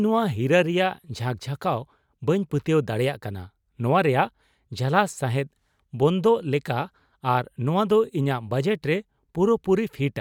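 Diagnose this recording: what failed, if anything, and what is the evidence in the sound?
No failure at any stage is audible in the speech, from capture through playback, so there is nothing to diagnose.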